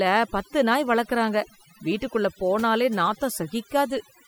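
A speech recording in which, from start to finish, the gaps between phrases fall to near silence dotted with small twinkling specks rather than a steady background hiss. These are the marks of overdone noise removal: a noise reduction process set far too strong on a noisy source pushes individual frequency bands down or shuts them off whenever they sit close to its noise estimate, stripping out the quieter parts of the voice along with the noise.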